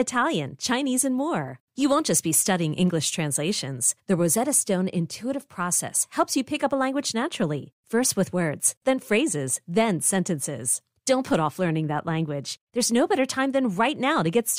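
No technical faults can be heard in this speech recording. There is nothing to place on a timeline.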